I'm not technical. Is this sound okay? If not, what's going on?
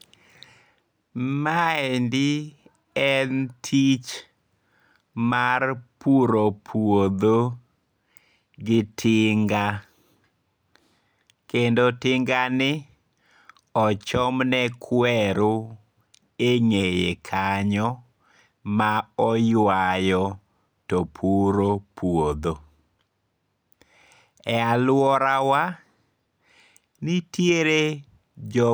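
Yes, nothing wrong turns up anywhere in this recording.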